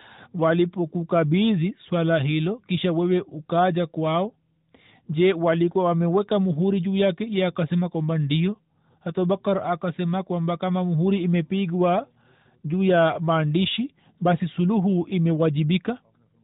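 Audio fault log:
No faults are present in the speech, which carries the light coding damage and the 4 kHz ceiling expected of an AMR narrowband mobile codec path at a rate that fits 12.2 kbps.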